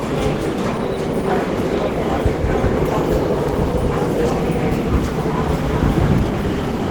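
Opus compression runs throughout, its damage plainly audible. The likely cause is a hybrid-mode encode at a rate that fits about 16 kbps, starving the bands so the sound turns grainy, rough and somewhat hoarse, even though content extends to about 20.2 kHz.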